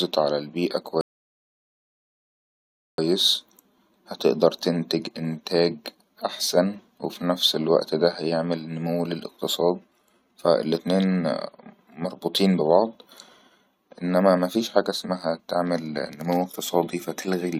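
A rebuffering stall from 1.01 to 2.98 s cuts the speech to silence for about 1.97 s while the player waits for data, then resumes exactly where it stopped.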